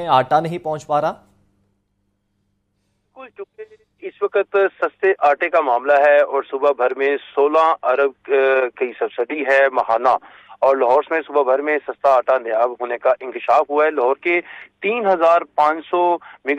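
No technical faults can be heard anywhere in the clip.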